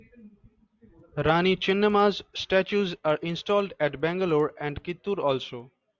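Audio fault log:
throughout: resampler restarted on every block. The conversion from 24 kHz to 16 kHz was done in separate 100 ms blocks, so each edge carries an error, heard as ticks at 10 Hz under the speech.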